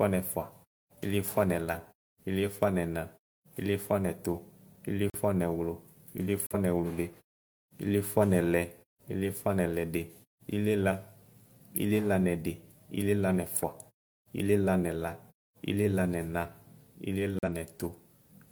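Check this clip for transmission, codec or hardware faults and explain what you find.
There's one fault here, corrupt frame muted, and it happens three times: 5.10 to 5.22 s, 6.46 to 6.60 s, and 17.39 to 17.49 s. Each is a sudden hole in the speech, roughly a tenth of a second long. The lengths suggest two or three compressed frames had bits flipped, the decoder rejected them, and the player dropped silence into the gap. Timing holds, so the speech picks up on schedule. The quiet fades between phrases come from muted pauses working as designed, not from this fault.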